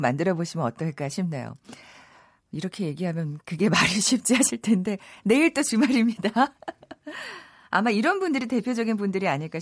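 No technical faults can be heard in the recording.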